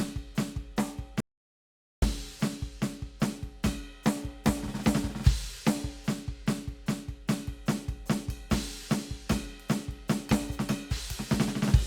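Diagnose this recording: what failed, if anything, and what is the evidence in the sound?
The music cuts to silence from 1.20 s to 2.02 s, losing 0.82 s, and resumes mid-flow. This is an audio dropout to silence, likely a lost input link at capture, with silence written meanwhile. Unlike a gate or fade, no noise floor remains.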